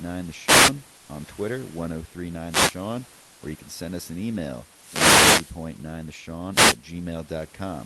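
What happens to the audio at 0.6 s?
A wireless microphone noise hit runs from 0.45 to 0.73 s. The radio signal fades, so receiver noise swells into a brief swish of static over the speech.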